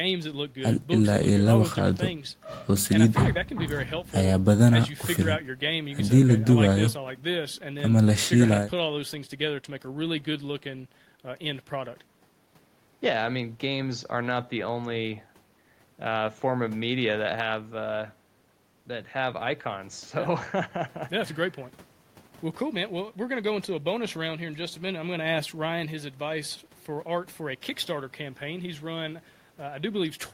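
A recording of speech, with no technical fault audible anywhere in it. Nothing in the signal calls for a time stamp or an explanation of a cause.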